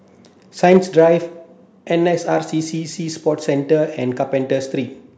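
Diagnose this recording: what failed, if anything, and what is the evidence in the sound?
From 0.63 to 1.04 s the loudest syllables of the speech take on a harsh, crackling edge with flattened peaks. This is likely microphone overload at the converter: input gain drove peaks about 3 dB past full scale, cutting off a small fraction of samples.

At 0.77 s, in the middle of that distorted stretch, voice and background drop together by about 2 dB in a single step. The likely cause is call processing detecting the clipping and stepping down the microphone volume at the device's input gain control.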